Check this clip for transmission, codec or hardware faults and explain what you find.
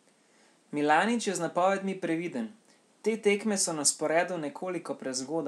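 No transmission, codec or hardware faults turn up in this clip.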